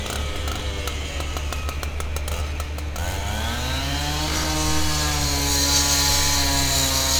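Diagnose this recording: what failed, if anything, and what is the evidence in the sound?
Nothing in the recording points to a failure at any stage, from capture through to playback: the everyday sound arrives continuous and intact, with no dropouts, discontinuities or other damage to the signal.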